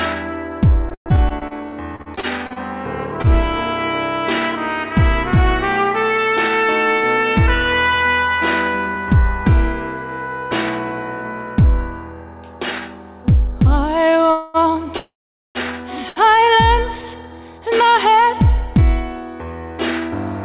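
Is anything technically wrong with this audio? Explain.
Yes. Between 0.89 and 3.35 s there is repeated packet loss, giving a robotic sound. Over a dozen short holes, the longest about 160 ms, are patched by extending the preceding sound, so about a fifth of that stretch is filler and roughly 330 ms of real audio is gone. It sounds choppy. On a spectrogram the harmonics smear into brief flat, repeated bands, and the waveform shows repeating stamped blocks.

Two call audio freezes follow, at 14.31 to 14.69 s and 14.97 to 15.58 s. The audio stops moving forward and resumes where it left off, so nothing is lost but time is inserted. The likely cause is packets delayed in transit, leaving the jitter buffer empty. The first is held as a fading buzz or hiss lasting about 234 ms. The second lasts about 576 ms and decays into roughly 440 ms of silence, which appears as a flat, empty gap in both views.

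At 16.09 to 16.19 s a short stall from a late packet stretches one sound by about 72 ms, then playback continues seamlessly. It is heard as a held moment with a slight buzz or dip. A spectrogram shows a briefly frozen spectral slice, and the waveform shows a short repeated cycle.

Throughout, the spectrum is empty above 4 kHz, consistent with a narrowband G.711 call path.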